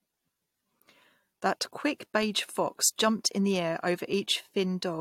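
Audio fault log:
No faults detected in this recording.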